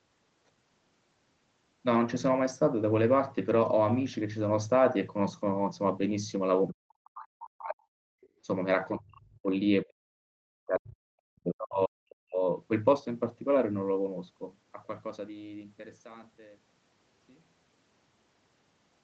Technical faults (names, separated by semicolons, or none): speech suppressed in double talk; other side's voice leaking through; background gated by the echo canceller